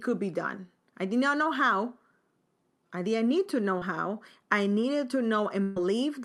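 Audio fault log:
3.78–3.82 s, short concealed packet loss: Right after "didn't need to know" and before "how I needed to", about 30 ms of the call failed to reach the decoder in time. The receiver covered roughly 28 ms of it by extending the preceding sound, following its pitch where voiced and using shaped noise where not, then crossfaded back into the real signal. This is heard as a brief smear or wobble at the joint, and a short consonant there may be lost.
5.63–5.77 s, burst of packet loss: After "how I needed to", about 130 ms of audio was lost as a consecutive run, too long for the receiver to bridge cleanly. Concealment synthesised roughly 128 ms by continuing the last received sound and attenuating it as the gap lengthened, so the gap comes across as a held, fading extension of that sound instead of silence. When real packets resume, playback jumps ahead, and the content that fell within the gap is simply absent.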